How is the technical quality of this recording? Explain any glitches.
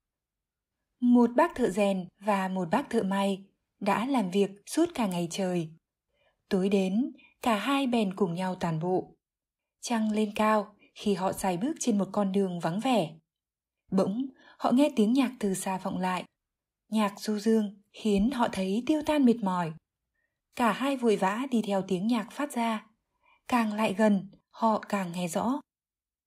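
There are no technical glitches to point to in this speech recording. Nothing in the audio stands out as a fault at any point.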